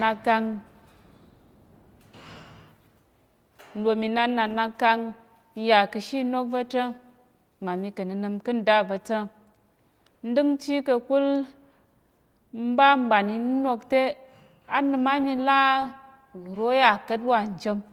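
No faults are audible.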